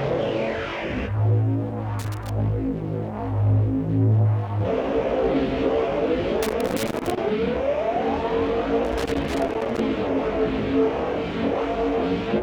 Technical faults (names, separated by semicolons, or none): loose connector crackle